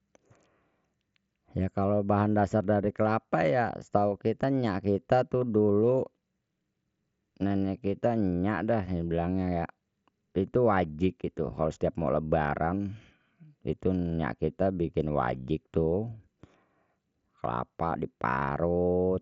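No technical faults are audible.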